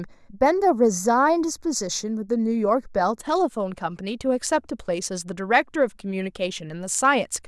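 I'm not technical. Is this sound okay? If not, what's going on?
No. From the start to about 3.2 s, the speech sounds hollow. That's channel delay (comb filtering). One side arrives a tiny fraction of a millisecond late. Combined into one, the two cancel at regular pitches, starting around 3 kHz.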